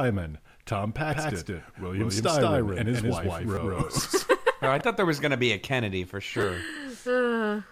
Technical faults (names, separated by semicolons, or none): doubled audio track; repeated buffer